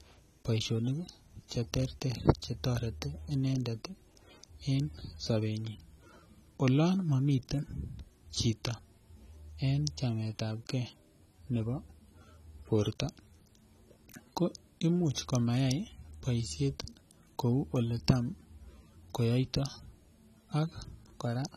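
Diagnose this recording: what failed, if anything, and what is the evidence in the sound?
Low-bitrate audio saved at a high bitrate, throughout the speech, at the codec stage: the artefacts of a heavily compressed encode remain across the whole clip despite the generous container rate. The likely cause is a lossy source at about 32 kbit/s, re-encoded to MP3 at a much higher rate.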